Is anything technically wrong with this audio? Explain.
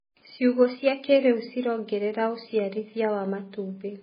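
Yes. Throughout the speech, nothing is present above 5 kHz, and the remaining sound is heavily damaged: watery, swirling textures, metallic chirps on s sounds, and smeared consonant attacks. This is likely MP3 compression at a starved bitrate, consistent with roughly 16 kbps. Short of bits, the encoder cuts the treble at a fixed point and zeroes weak frequency lines, which flicker on and off from frame to frame and produce the swirl and chirping.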